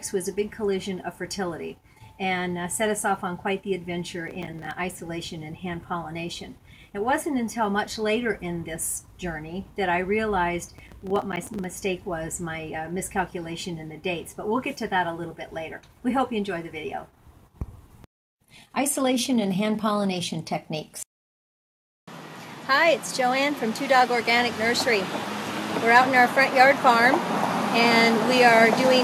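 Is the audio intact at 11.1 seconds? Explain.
No. At 11.1 seconds the sound sits inside a burst of processor overload crackle running from about 10.77 to 11.64 s. The processor repeatedly missed its deadlines for short buffers of roughly 5 ms, leaving around twenty brief silent gaps with abrupt edges, heard as gritty tearing over the sound. On a waveform these show as tiny flat dropouts cut sharply into the signal, and on a spectrogram as thin vertical broadband streaks across that stretch.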